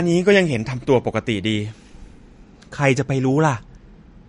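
From start to finish the speech carries MP3 compression damage. Nothing sounds above 10.6 kHz. That hard ceiling comes from the encoder cutting the treble at a fixed frequency. The damage is plainly audible. Weak frequency lines flicker in and out between frames, giving a watery, swirling texture. S sounds turn metallic and chirpy. Consonant attacks smear. All this points to a low bitrate, around 44 kbps. A starved MP3 encode is the likely cause.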